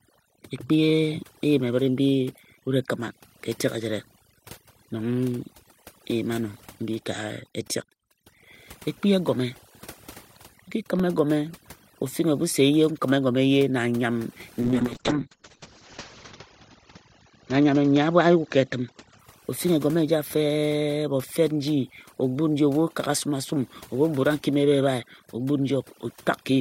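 Overdone noise removal runs through the whole clip. The suppressor was set too aggressively, so it pulls individual frequency bands down or removes them whenever they sit near its noise estimate, and the softer parts of the speech go with them. The background drops away, breaking up into small twinkling specks.

Periodic USB or driver dropouts begin at 3.01 s and recur every 2.0 s until about 11.0 s, about five in all. Each time, something stalled the audio path for roughly a millisecond, and the missing stretch was replaced with silence. Because the gaps are so short and evenly spaced, they sound like a regular series of small ticks over the speech rather than audible pauses.

A call bitrate drop runs from 14.62 to 19.25 s. The call's bandwidth estimate fell, and the encoder was forced to spend far fewer bits. The sound points to a fall from around 48 kbps to about 8 kbps, at its lowest for about 1.75 s. 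With so little data, the coding turns coarse and the audio bandwidth shrinks from 20 kHz to 8 kHz. The speech becomes rough, muffled and watery until the rate recovers.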